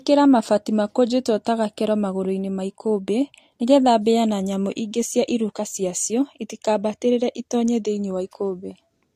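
Speech, with transcoding between lossy codecs throughout. Nothing remains above 14.6 kHz. Two layers of codec artefacts are heard together. This likely comes from an earlier Vorbis encode at around 68 kbit/s re-encoded to AAC-LC at about 48 kbit/s.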